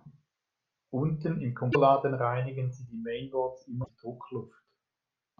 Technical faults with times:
1.69-1.76 damaged data in a compressed stream
3.80-3.90 damaged data in a compressed stream

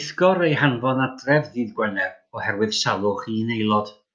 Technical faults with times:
none

